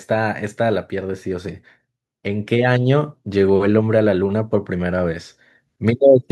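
From 2.24 s to 5.22 s the level climbs steadily by about 6 dB, a case of automatic gain rising: the gain control judged the input too quiet and turned itself up over roughly three seconds, so speech and background noise swell together.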